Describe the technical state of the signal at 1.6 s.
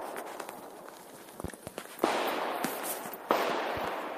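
At 1.6 s the signal carries a loud pop, two sharp pops between 1.44 and 1.70 s, peaking well above the sound. A likely voltage pulse caused them. The sound continues underneath.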